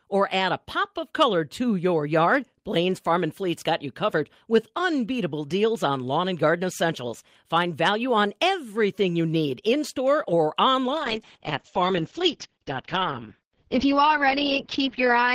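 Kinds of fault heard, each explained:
Call bitrate drop: from 10.93 s, right after "need in store or", the speech abruptly turns rough and muffled and stays that way to the end. The call's bandwidth estimate fell, so the encoder was pushed from 32 kbps down to 8 kbps and coded far more coarsely, also cutting the audio band from 20 kHz to 8 kHz. On a spectrogram the energy above 8 kHz vanishes at that point, and the remaining harmonics look smeared and blocky, while the waveform envelope stays largely intact.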